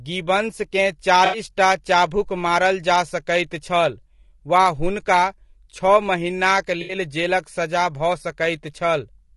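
The speech sounds rough and grainy from start to finish. Noise fills the gaps between the harmonics. The top band sounds thin and synthetic. This points to low-delay AAC compression, likely AAC-ELD as used in video calls. Its short frames cannot resolve pitch harmonics finely. At a low rate the coder runs out of bits, and the damage is plainly audible. The result fits a bitrate of around 32 kbps.

At 1.25 s, AAC frame loss with concealment appears. The sound smears into a noisy, phasey blur until 1.39 s. Then speech resumes with "चाभुक मारल जा सकैत". About 80 ms of audio went missing, which fits four lost frames. The decoder patched the gap by reusing the last good spectrum with scrambled signs or interpolated energy. The same fault returns from 6.81 to 6.95 s. It has the same smeared, phasey texture, and again about 80 ms is lost.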